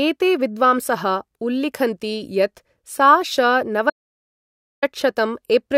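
At 3.9 s the speech cuts off mid-flow and resumes abruptly at 4.82 s, an audio dropout to silence lasting about 0.92 s. The input was likely lost, through a dropped link, disconnected device or stray mute, while recording continued writing silence. What sets it apart from a natural pause or a noise gate is that the gap is silent with no room tone, and whatever was said during it is simply missing.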